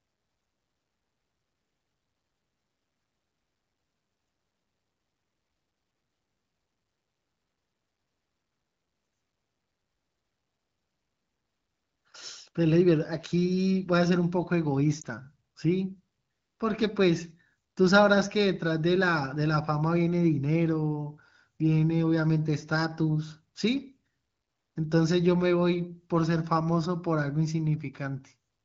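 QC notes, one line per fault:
15.01–15.06 s, lost AMR speech frame: a brief dip or warble in the speech, consistent with a single 20 ms frame failing its checksum. The decoder filled the gap by repeating the previous pitch and vocal tract settings at reduced gain, so the sound smears rather than cutting out. The spectrogram shows a short vertical band of lowered energy with blurred harmonics, and the waveform shows a small envelope dip before the level recovers. The surrounding wideband codec sound is clear.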